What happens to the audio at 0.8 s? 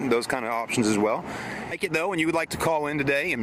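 Nothing audible goes wrong at 0.8 s; the audio plays through that moment intact, with no dropout, click or other fault.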